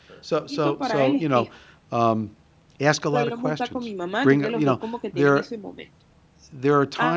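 A speech recording with nothing technically wrong in it, having only passed through ordinary call microphone processing.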